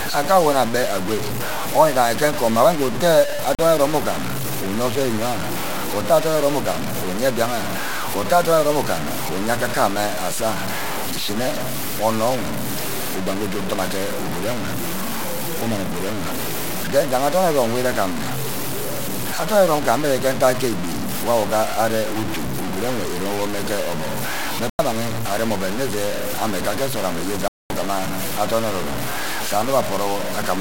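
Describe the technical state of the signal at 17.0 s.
At 17.0 s the speech is grainy and gritty, with distortion that tracks the voice and quieter passages breaking up or sputtering. The likely cause is low bit depth without dither, with samples truncated to what sounds like 4 bits, so the error sits only about 10 dB below the signal.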